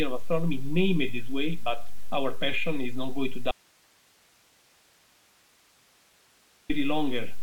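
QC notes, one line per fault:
3.51–6.69 s, audio dropout to a faint residue: the sound cuts abruptly for about 3.18 s, leaving only hiss roughly 40 dB down. The path after the break likely stayed live. The waveform collapses to a thin band, and the spectrogram shows faint broadband noise between sharp edges.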